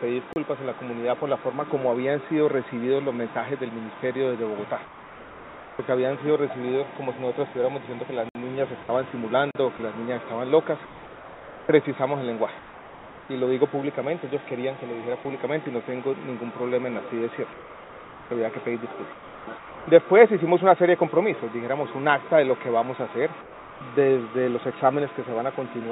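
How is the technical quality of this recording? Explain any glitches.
The recording has a handful of glitches, mostly in how the quiet stretches are handled. It has the narrowband character of a call path, with nothing above about 4 kHz.

Blocks of digital silence land at 0.33 s (about 30 ms), 8.29 s (60 ms) and 9.51 s (40 ms). Samples were replaced with zeros, probably because the output buffer wasn't filled in time. The hard cut in and out leaves a short hole each time.

Comfort noise replaces the background from 4.85 to 5.79 s, 17.53 to 19.87 s and 23.41 to 23.81 s. The sender most likely stopped transmitting during pauses, and the receiver filled them with synthetic noise. You hear the real background swap for a flat, featureless hiss, roughly 3 dB quieter in the first and last stretches.

The sound is chopped by the voice detector between 8.83 and 13.29 s, with about 1.6 s in total swapped out. 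The detector likely kept flipping between sending and not sending, so quieter bits got replaced by fill. It comes across as choppy.

Sound is dropped by the voice detector at 15.23 s and again from 19.57 to 19.87 s. The detector likely took quiet material for background and cut it, losing about 10 ms and 200 ms of actual sound. Comfort noise stands in until the sound picks back up.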